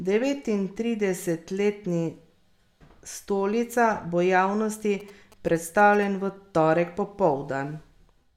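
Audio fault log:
5.00–6.04 s, GSM signalling bursts: galloping ticks and short 217 Hz buzzes after "bo javnosti", roughly 25 dB below the speech, where the audio circuitry rectified a nearby 2G phone's signalling radio bursts.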